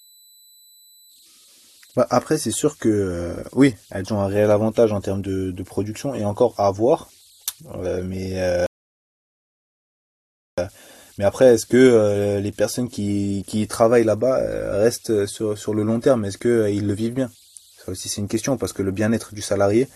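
Converter idle tones run through the whole recording. Without dither at the delta-sigma converter, the modulator settles into repeating bit patterns whenever the speech level drops low, and those patterns produce a faint whistle around 4 kHz. It is most exposed in the pauses between phrases, and under quiet passages it shows up as a grainy layer. The error sits at about -34 dB relative to the signal.

At 8.66 s a rebuffering stall cuts the audio to silence. The player drained its store of downloaded audio and halted until more data arrived. Playback resumes at 10.58 s from exactly the point where it stopped, so no speech is skipped or repeated. The stall adds 1.91 s of dead air to the timeline, heard as an abrupt gap followed by a clean restart.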